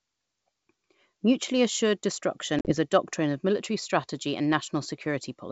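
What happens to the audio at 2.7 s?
Around 2.7 s the sound breaks up into hard-edged gaps of silence. About 60 ms of audio is missing across an 80 ms stretch, with the longest single hole lasting 40 ms, inside a disturbance running from 2.59 s to 2.74 s. After each gap the sound returns slightly distorted, then settles within some tens of milliseconds. This is packet loss on an ADPCM call. Several lost packets were filled with silence, so the decoder's adaptive predictor and step size drifted out of step with the sender's. That mismatch causes the rough re-entry until the two sides realign.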